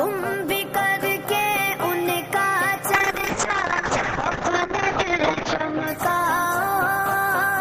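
A call bitrate drop starts at 2.95 s and lasts to the end: the bandwidth estimate fell and the encoder coarsened sharply, which fits a fall from around 64 kbps to roughly 6 kbps. Highs above 8 kHz vanish, and the audio turns rough and muffled, worst for about 2.17 s.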